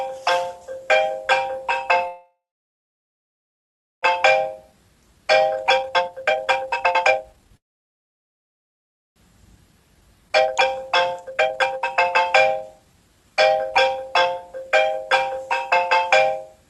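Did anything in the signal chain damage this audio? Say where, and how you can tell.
Yes. The damage sits in the network and jitter-buffer stage of a call path. The band limit near 12 kHz and the coding texture point to Opus at around 32 kbps, and that part is not at fault.

The call audio freeze occurs twice, from 2.07 to 4.04 s and from 7.57 to 9.18 s. Each time the sound smears briefly and then drops to silence, for about 1.65 s in the first case and almost the whole 1.59 s in the second. The likely cause is delayed packets draining the jitter buffer. When playback resumes it continues from the exact point where it stopped. Nothing is lost, only about 2 s and 1.6 s of added delay, and that distinguishes a freeze from a dropout.

The jitter buffer speed-up follows each freeze, from 4.16 to 7.57 s at about 147% speed and from 9.38 to 14.99 s at about 121%. Pitch stays put while events arrive hurried. 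That rules out a resampling or clock error, which would shift the pitch. The receiver is trimming short pitch-period pieces over and over to shed the backlog, roughly 1.5 s in the first stretch and about a second in the second.

A skip ahead falls at 10.29 to 10.31 s, inside the second speed-up. The sound jumps forward with almost no gap, only about 8 ms of fill, and roughly 0.7 s of material is gone. This is the reverse of a freeze: content disappears instead of being delayed. It also differs from the speed-up, because it is one abrupt splice rather than gradual trimming. The missing audio was dropped either in transit or by the buffer overflowing while later audio was already queued.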